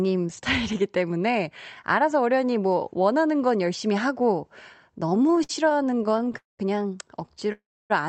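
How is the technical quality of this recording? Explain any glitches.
The recording has clear timing problems in its last three seconds: repeated stalls and two short freezes, heard through a call codec whose band stops at about 8 kHz.

Repeated stalls (stutter) run from 5.09 to 6.35 s and again from 7.27 to 7.50 s. Packets arrived unevenly, so the playout buffer kept emptying and the last sound was stretched over each wait, the longest about 54 ms. The speech drags and judders. A spectrogram shows smeared, repeated frames, and the waveform shows a choppy envelope.

Call audio freezes occur at 6.37 to 6.61 s and 7.52 to 7.92 s, likely from packets held up in transit. Each freeze begins with a brief fading continuation and then goes silent, for about 160 ms in the first and 280 ms in the second, before the speech resumes where it stopped. Both the waveform and the spectrogram show these as flat, blank gaps.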